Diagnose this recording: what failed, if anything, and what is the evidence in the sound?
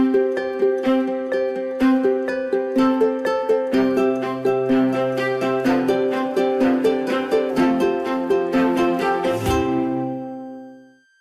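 Analogue power stage: a switching supply whistle sits throughout, a tone drifting between 1.57 and 1.59 kHz, roughly 40 dB down, from the supply cycling audibly.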